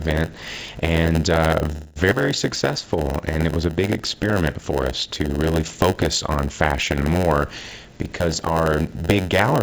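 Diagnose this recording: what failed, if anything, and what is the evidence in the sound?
Block size mismatch (padded), present throughout: a steady buzz near 92 Hz sits under all the audio, which also runs at about 0.92 times normal speed. At the driver or buffer stage, short blocks are zero-padded into longer ones, inserting a brief gap every block.

Call audio freeze, from 1.72 to 1.98 s: the sound holds and fades for about 220 ms, then resumes where it stopped with nothing lost. At the network stage, packets were likely held up in transit, so the jitter buffer ran dry and the receiver extended the last sound.

Skip ahead, at 2.11 to 2.13 s: playback jumps forward with almost no gap, and roughly 100 ms of audio is missing at the join. A stretch was dropped, in transit or by the jitter buffer, while later packets were already queued, splicing the two sides nearly directly.

Jitter buffer slow-down, from 2.73 to 3.42 s: the audio drags to about 86% speed at unchanged pitch, with drawn-out sounds. 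The receiver repeated pitch periods and pause fragments, adding 97 ms to rebuild its reserve.

Jitter buffer speed-up, from 8.2 to 9.49 s: the audio hurries to about 117% speed at the same pitch. Through the G.722 call path, which carries nothing above 8 kHz, the receiver trimmed short pitch-period pieces repeatedly, removing around 200 ms to cut excess buffered delay.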